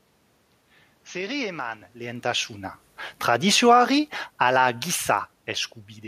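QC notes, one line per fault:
3.13–4.59 s, automatic gain falling: after "eman lehentasuna" the level sinks gradually by about 7 dB as the gain control turns itself down. The room noise drops along with the speech, which separates it from the talker moving near 2 s.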